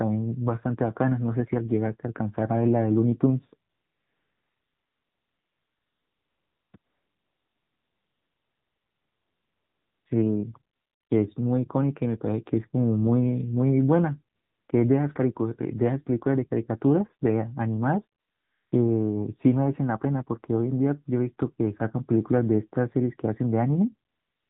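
Throughout, the speech carries the sound of the AMR narrowband mobile codec: everything above 4 kHz is gone, and voiced sounds take on a buzzy, synthetic edge where the vocal-tract model and its sparse pulse excitation stand in for the real waveform. The damage is plainly audible, which points to a low mode, about 7.4 kbps. Unlike a plain low-pass filter, this also alters the texture of the voice itself, not just its brightness.

AMR comfort noise fills the pauses from 3.70 to 6.74 s, 6.78 to 10.06 s, 10.76 to 11.10 s, 14.36 to 14.68 s, 18.20 to 18.72 s and 24.10 s to the end. In each of these stretches, lasting 0.32 to 3.28 s, the phone stopped sending speech frames, and a smooth, steady synthetic hiss replaces the real background, switching in and out at the edges. A noise gate would drop to silence instead. Here the pause is filled with even, featureless noise.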